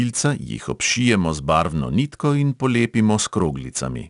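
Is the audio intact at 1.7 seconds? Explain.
No, at 1.7 seconds the speech carries 4-bit ADPCM compression, which runs through the whole clip. Each sample is coded as a small 4-bit step from a predicted value, so the coding error rides along with the level as a gritty hiss on loud syllables, plus roughness on sharp onsets where the step size lags. Nothing sounds above about 10.6 kHz. Unlike steady dither or tape hiss, this noise rises and falls with the speech itself.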